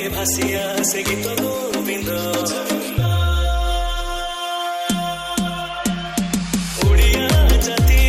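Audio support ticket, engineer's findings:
MP2 compression, throughout. Dull top end, upper bands dropping in and out, gurgling granular texture on everything left. Likely an MPEG Layer II encode starved of bits, with high sub-bands switched off and the rest coarsely quantised. Damage plainly audible; consistent with roughly 80 kbps.

DAB burbling, at 1.72 s. Brief short blips of noise over the programme. Reception bit errors slipping past error correction into the MP2 stream, corrupting samples so single sub-bands get short blips of noise. Sounds like a few bad frames from a low error rate, around 0.2 percent.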